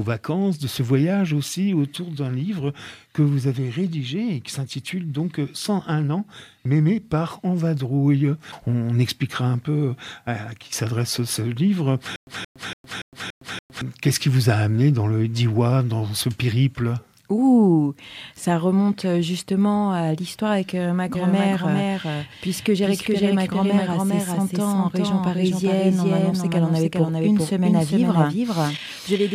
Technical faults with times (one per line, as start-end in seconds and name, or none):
12.16-13.81 stutter with silent gaps
21.15-29.34 doubled audio track